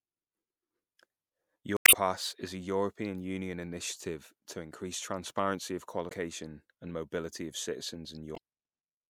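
From 1.74 to 1.95 s, just before "is a", the speech breaks up briefly, and two briefer blips follow at 6.08 to 6.12 s, right after "to increase transparency of", and at 8.33 to 8.38 s. These are damaged data in a compressed stream: the decoder misreads corrupted frames and loses sync until it finds a valid header. What separates this from a plain network dropout is that the decoder itself loses frame sync on bad data, rather than the audio simply stopping.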